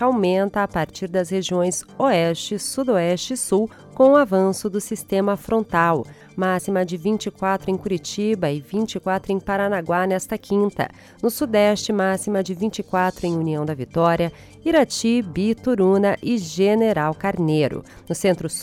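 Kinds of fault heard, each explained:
Nothing here sounds off to my ear; there's no glitch, dropout or distortion anywhere in the audio.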